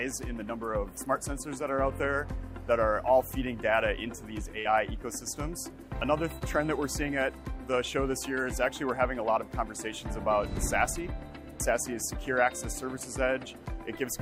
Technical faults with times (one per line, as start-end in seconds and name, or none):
4.59-4.67 burst of packet loss
6.39-6.43 short concealed packet loss